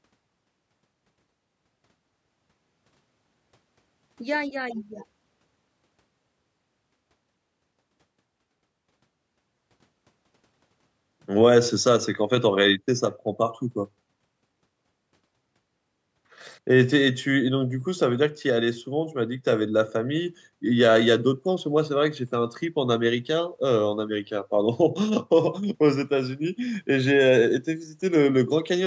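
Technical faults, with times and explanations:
The speech signal shows no technical faults; it carries only the normal shaping of call microphone processing, with the lowest bass filtered away and nothing above 8 kHz.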